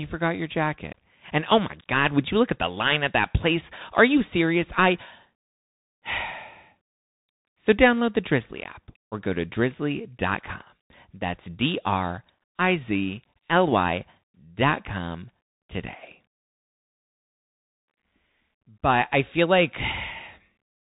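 A speech recording passed through the Bluetooth CVSD headset codec for its full length. Nothing above about 3.8 kHz survives. One-bit up-or-down coding, which fits a 64 kbps stream, leaves a granular hiss underneath. Sibilants turn scratchy, and loud high sounds outrun the adaptive step and distort.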